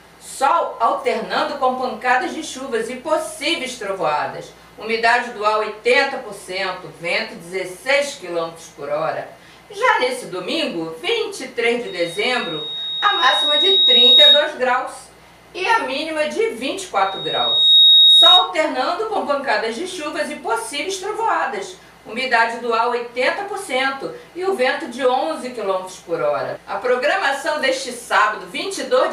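The audio has loudspeaker feedback squeal twice, both on the same tone at 3.8 kHz. The first starts at 11.86 s, swells over about two seconds and holds until 14.52 s. The second, from 16.95 s to 18.52 s, climbs much faster, in well under a second. Each one peaks around 10 dB above the program. A mic is hearing its own speaker, and at that frequency the loop gain tips past one, so the tone feeds itself until the loop gets broken.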